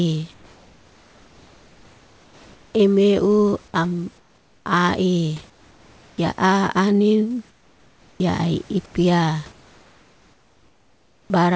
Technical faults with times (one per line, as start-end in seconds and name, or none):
0.34-2.74 comfort noise in place of the background
4.18-4.66 comfort noise in place of the background
5.50-6.18 comfort noise in place of the background
7.50-8.20 comfort noise in place of the background
8.86-8.94 comfort noise in place of the background
9.52-11.30 comfort noise in place of the background